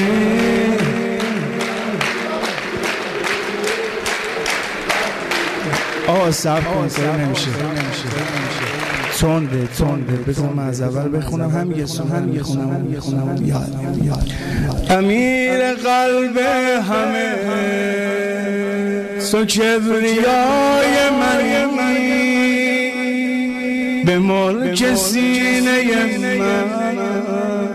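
No technical faults can be heard anywhere in the audio.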